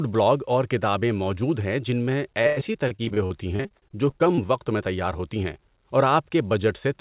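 From 2.42 to 4.62 s there's repeated packet loss (robotic sound): around twenty dropouts, the longest about 97 ms, patched by stretching the previous sound. It comes across as choppy. The band tops out at 4 kHz, which fits a telephone-grade call codec.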